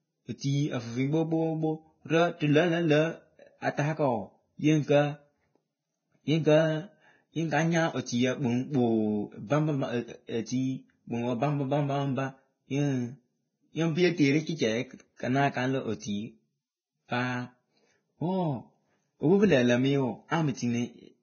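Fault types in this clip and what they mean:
Vorbis compression: the speech has no content above 6.5 kHz and carries heavy codec damage throughout, likely from low-bitrate Vorbis encoding at a rate that sounds close to 16 kbps. At that rate the encoder keeps only a coarse spectral outline and swaps fine upper-band detail for noise of similar energy. The treble turns hissy and grainy, tonal parts of the voice sound roughened, and consonant onsets are smeared.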